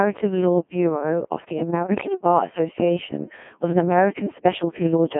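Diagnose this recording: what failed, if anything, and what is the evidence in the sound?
Speech is robotic and buzzy throughout, confined to 150 Hz to 3.4 kHz. This is a Codec 2 vocoder at the codec stage, resynthesising the voice from sine waves.

From 1.85 to 2.08 s, pitch and level lurch into warbling gibberish. These are bit errors on digital voice radio, about one bit in ten, scrambling whole vocoder frames.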